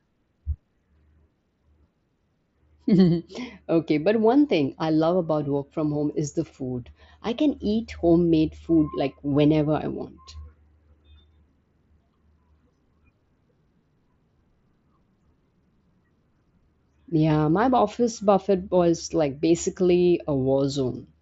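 Fault-free speech, with the mSBC Bluetooth headset path capping the bandwidth at 8 kHz and adding only a light grain on louder passages.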